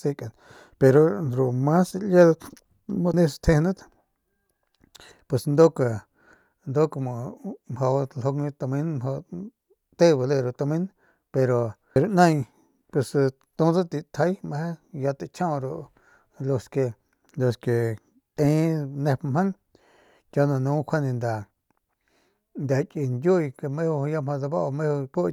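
Damaged data in the compressed stream throws the decoder off its frames three times, at 3.14, 11.96 and 18.37 s. Each time it misreads the corrupted bytes and has to resynchronise on the next frame header, leaving a brief glitchy blip cutting across the speech.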